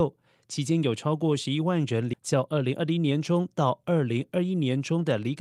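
At 2.13 to 2.15 s, a skip ahead: about 0.7 s of speech was discarded while later audio waited, so playback jumps forward with no gap. From 2.23 to 3.32 s, a jitter buffer speed-up trims short pitch-period pieces, removing about a tenth of a second; speech runs 107% fast, slightly hurried, at unchanged pitch.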